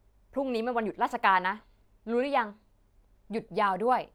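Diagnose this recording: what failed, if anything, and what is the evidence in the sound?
Nothing stood out on listening to this speech recording that would point to a failure at any stage of the chain.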